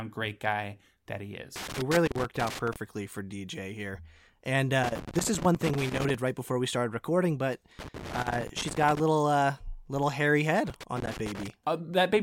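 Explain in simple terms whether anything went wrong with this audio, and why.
Something did go wrong. The speech is interrupted four times by loose connector crackle: from 1.56 to 2.76 s, 4.83 to 6.15 s, 7.79 to 9.00 s, and 10.67 to 11.50 s. Each burst is an irregular scratching and crackling. It happens when a worn or dirty plug or socket keeps losing and regaining contact, chopping the signal into fragments. The bursts recur every few seconds and last about one second each.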